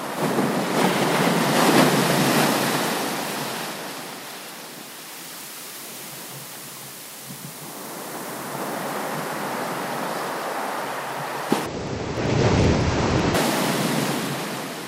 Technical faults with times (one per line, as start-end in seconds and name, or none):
11.66-13.35 interleaved audio read as planar